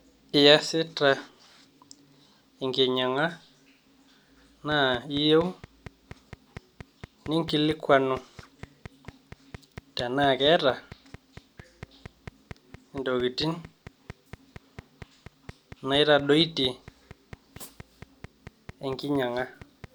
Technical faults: train of clicks

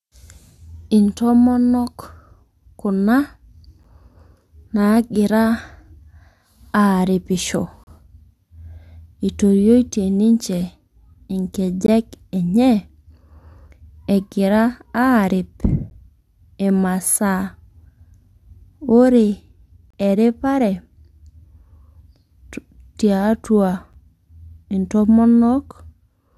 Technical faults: gap between stream segments

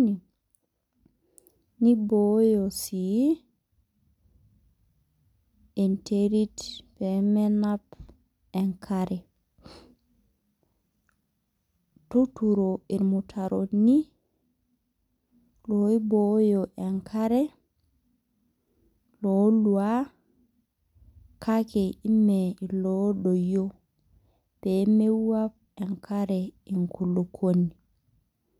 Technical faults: none

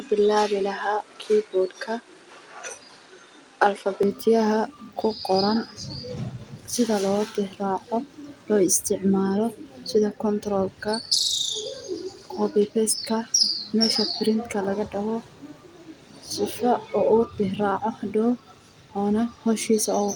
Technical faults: input switched to a poorer device

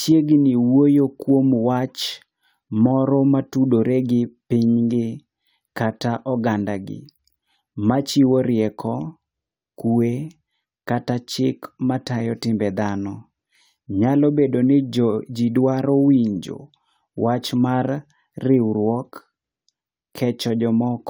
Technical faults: none

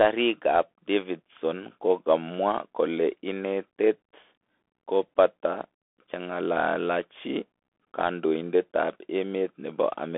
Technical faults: Bluetooth CVSD headset codec

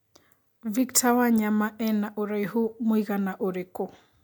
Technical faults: none

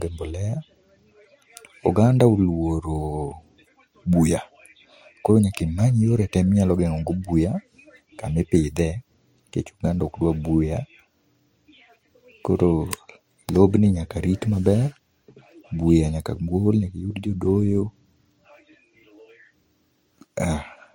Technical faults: transcoding between lossy codecs

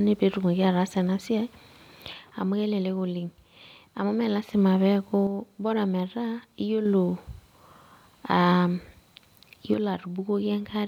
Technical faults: one channel drops out

